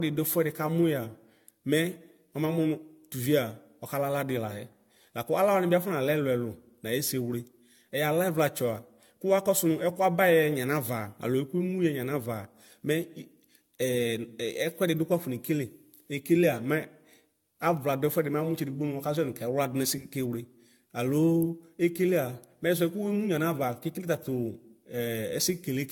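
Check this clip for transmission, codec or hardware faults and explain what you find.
One fault is present, across the whole clip. Throughout, generation loss: likely about seven AAC re-encodes stack quantisation noise, leaving swirly, hollow, smeared speech with blurred attacks and nothing above 17 kHz.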